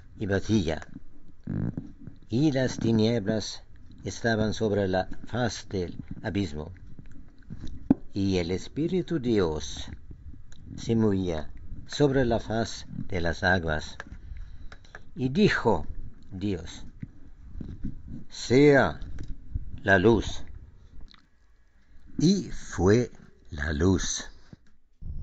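From 21.0 to 24.25 s, regular ticks sound four times a second. This is a resampler restarted on every block. Converting 16 kHz to 48 kHz, it handled each 250 ms block alone. Every edge lacked its real neighbouring samples, leaving a small error.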